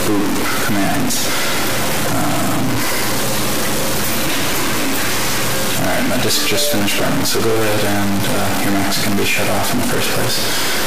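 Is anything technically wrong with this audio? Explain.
Yes. Throughout the clip, one data bit is likely stuck, from a broken line or converter, so about half the samples are pushed off by a step of about -15 dBFS. This gives harsh, buzzy distortion, and quiet passages fill with loud noise.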